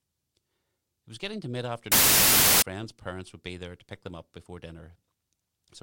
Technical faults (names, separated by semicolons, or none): wrong sample width